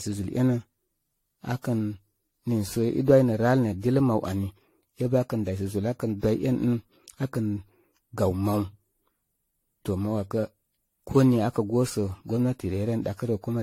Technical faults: generation loss

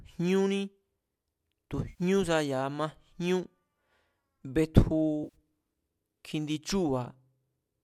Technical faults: AAC frame loss with concealment

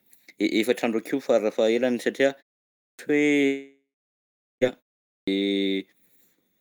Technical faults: clipped start after a pause; long network dropout

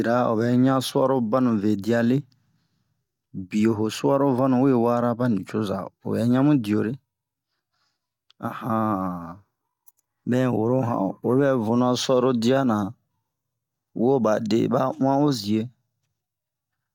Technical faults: none

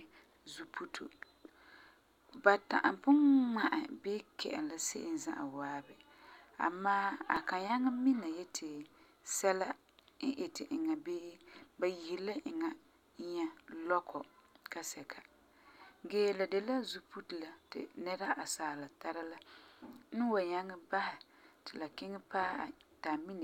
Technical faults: repeated buffer; overlap between stream segments

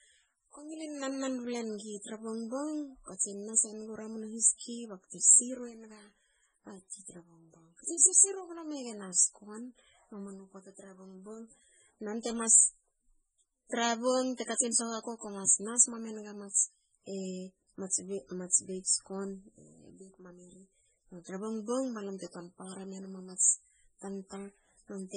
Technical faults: MP3 compression; pre-echo

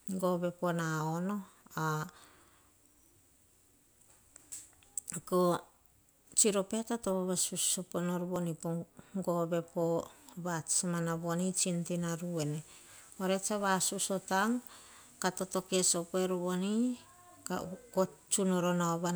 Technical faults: dropped buffer (overrun)

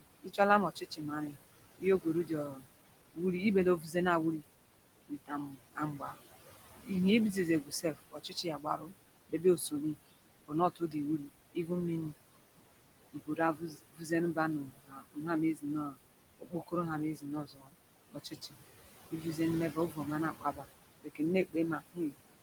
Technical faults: noise suppressor artifacts; speech cut by the noise suppressor

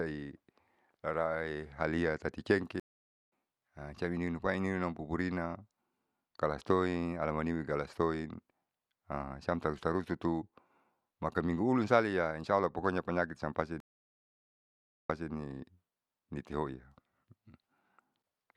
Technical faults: stream reconnect

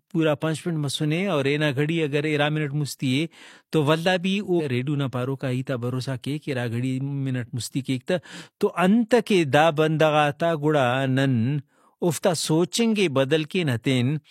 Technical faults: stream segment skipped

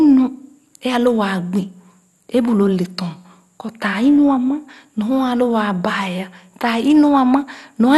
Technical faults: MP2 compression

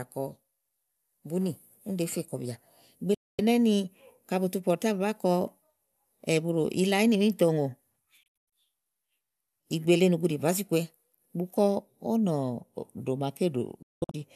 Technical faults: digital broadcast dropout

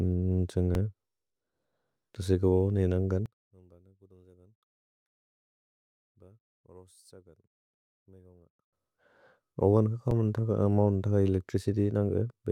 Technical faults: repeated buffer; one channel inverted

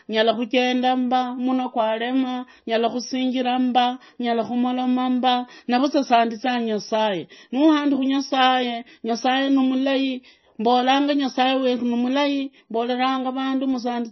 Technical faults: MP3 compression

